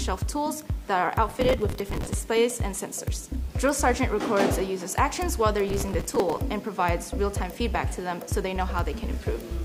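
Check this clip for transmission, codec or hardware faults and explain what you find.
Two bursts of processor overload crackle, from 1.29 to 2.14 s and from 5.67 to 6.4 s. The processor kept missing its buffer deadlines, dozens in a row, replaying stale audio each time. The hard edges pile into gritty tearing, with grain that fits buffers of about 5 ms.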